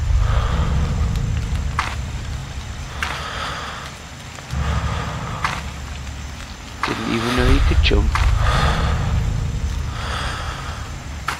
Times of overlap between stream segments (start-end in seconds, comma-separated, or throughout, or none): 7.49